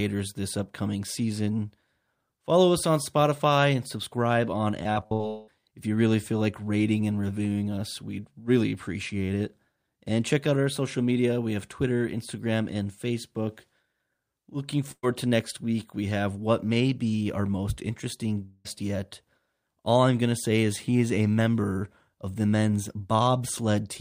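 Repeated packet loss (robotic sound) runs from 4.83 to 5.21 s, right after "and subscribe on". Six separate gaps hit that stretch, the longest 64 ms, adding up to about 0.16 s of lost audio. Each hole was bridged by stretching the preceding sound, and the next hole arrived before the stream could settle. Filler makes up 42% of the span, giving a choppy texture with fragments missing.

A long network dropout follows immediately, from 5.27 to 5.49 s, still just after "and subscribe on". About 0.2 s of audio never arrived. The gap is filled entirely by an extended continuation of the last sound, a fading buzz or hiss with no silent stretch, before the audio picks up further along without the lost portion. A dropout of roughly this length is the likely cause.

A burst of packet loss occurs at 14.91 to 15.05 s. About 0.12 s went missing in a short run. The receiver held on to the last sound and faded it down, so a brief buzz or hiss dies away into about 50 ms of silence before the audio resumes with that piece skipped.

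A second likely long network dropout, from 18.45 to 18.67 s, comes just after "be our most interesting". Again about 0.2 s is lost, and the hole is covered entirely by a stretched, fading continuation of the preceding sound with no silence. The audio then carries on from a later point.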